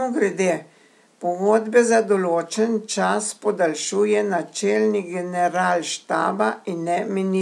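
No technical faults are audible.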